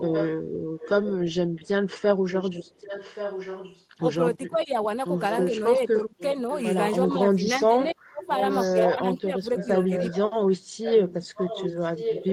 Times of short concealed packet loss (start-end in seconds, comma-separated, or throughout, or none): none